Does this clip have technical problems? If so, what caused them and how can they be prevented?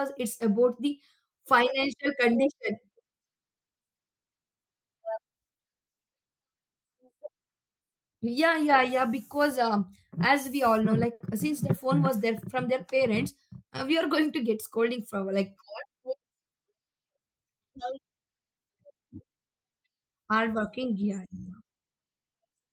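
Yes, there are three separate problems, all typical of audio carried over a packet network.

At about 11.13 to 11.22 s there's a short stall from a late packet. A packet didn't arrive on time, the jitter buffer ran dry, and the receiver stretched the last bit of sound for about 70 ms until the data turned up. Playback then picked up exactly where it left off, so nothing is lost, but that moment drags slightly and everything after it runs about 70 ms later. A slightly deeper jitter buffer or a more stable network path would absorb a delay like this.

From 14.19 to 15.41 s you get a jitter buffer speed-up. Once the held-up packets arrived together, the buffer was holding more than it wanted to, so the receiver trimmed tiny pitch-period-sized slices out, again and again, cutting roughly 70 ms in total. The speech plays about 6% fast at its normal pitch, so it sounds a bit rushed. Keeping network delay steady means the buffer rarely overfills and doesn't need to catch up like this.

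The third is a call audio freeze, 19.48 to 19.66 s. The sound stops and there are about 160 ms of silence, then it resumes from where it cut off. Nothing is missing, but a gap has been inserted and the delay grows by about 160 ms. The likely cause is packets held up in transit long enough to empty the jitter buffer completely. Prioritising the call traffic and avoiding congested or unstable links would prevent stalls that long.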